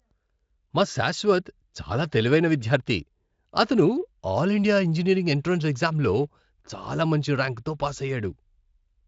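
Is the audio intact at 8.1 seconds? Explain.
Yes, the speech at 8.1 seconds is intact, with no dropout, glitch or other fault at that moment.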